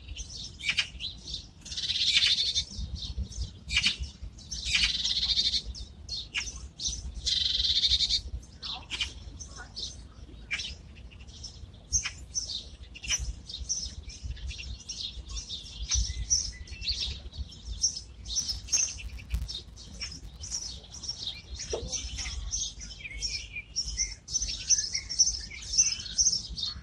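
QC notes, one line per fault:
18.38 to 21.50 s, filter restarted on every block: a steady buzz around 172 Hz rides along with the sound, rising and falling with its level. Each block kicks off from a cleared filter and ticks, which fits a 256-sample block size.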